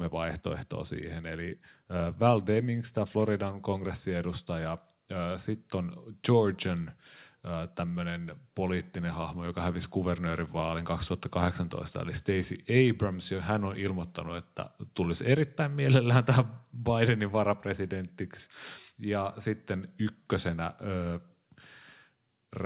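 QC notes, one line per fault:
No faults found in this speech clip. It carries the audio of a working call path with nothing above 4 kHz, a narrowband limit that fits a G.711 mu-law codec at 64 kbps.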